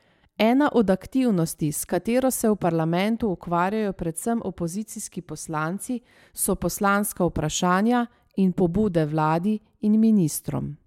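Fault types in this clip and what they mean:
No fault types can be heard in this clip.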